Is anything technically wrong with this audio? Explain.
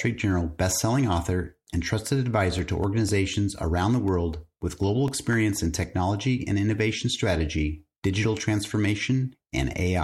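Yes. From 2.34 to 5.83 s there are periodic USB or driver dropouts. Every 0.25 s, a background task stalls the audio path and roughly a millisecond of speech is replaced by silence, producing evenly spaced ticks. Random clicks or irregular buffer underruns would not keep this steady rhythm.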